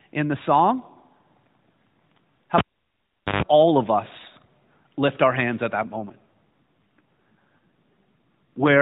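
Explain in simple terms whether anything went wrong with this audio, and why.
At 2.58 s there is a pop, then about 0.8 s of near silence, a short low 50 Hz buzz, and another pop before "all of us lift": a cable pulled and plugged in while live.

From 5.84 s after "lift our hands at" to the end, the narrowband phone-quality voice turns rougher and more robotic: an AMR rate drop, where a weak mobile link forced the codec onto fewer bits.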